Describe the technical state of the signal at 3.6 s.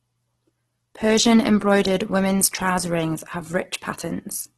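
At 3.6 s, as throughout, likely Opus compression at a starved rate near 12 kbps fills bands with folded noise, leaving the speech grainy and rough, with nothing above 12.4 kHz.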